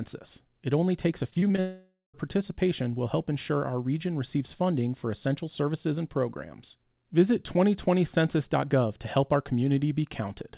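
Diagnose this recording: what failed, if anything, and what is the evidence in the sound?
Repeated packet loss on the network left five short gaps, none longer than 22 ms, between 1.3 and 1.6 s after "only takes a". Concealment patched about a third of that span, making it choppy and robotic.

A long network dropout is the likely cause of the gap from 1.6 to 2.16 s. Concealment stretches into a fading buzz, about 0.18 s of silence follows, and the audio resumes at "participation will help ensure".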